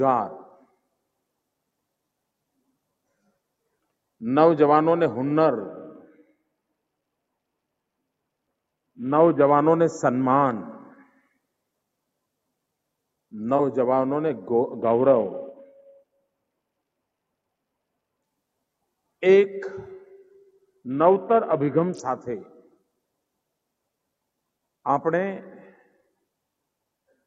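Sound cut by the noise suppressor at 0.49 to 0.78 s: the suppressor mistook this material for noise and pulled it down by as much as about 19 dB for roughly a third of a second, so the sound sinks in level.

Bluetooth SBC bit pool drops at 5.67 to 9.50 s, 14.83 to 18.25 s and 20.90 to 21.99 s: the link starves the encoder, which fits a bit pool falling from 28 to about 6, near 60 kbps. The treble goes dull and a gritty quantisation haze rises until the rate recovers.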